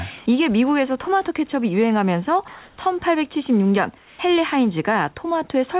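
From 2.48 to 2.78 s and again from 3.98 to 4.19 s, the pauses lose their real background and take on a steady, smooth hiss, about 1 dB louder in the first gap and about 2 dB quieter in the second. This is comfort noise in place of the background, likely from discontinuous transmission on the narrowband call link. Unlike a noise gate or dropout, the gaps never fall silent. Synthetic noise fills them, and the room's texture returns with the sound.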